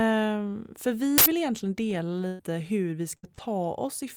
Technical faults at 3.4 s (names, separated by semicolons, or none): short concealed packet loss